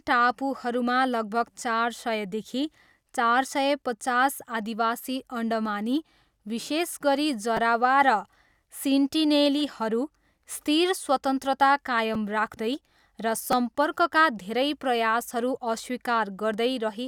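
Speech with four brief buzzy clicks at 1.6, 7.57, 12.14 and 13.52 s, each a tiny slice of sound looping a few times with hard joins: a repeated buffer. Audio arrived late, so the device replayed a roughly 5.33 ms block, which fits a 256-sample buffer, losing about 10 to 15 ms each time.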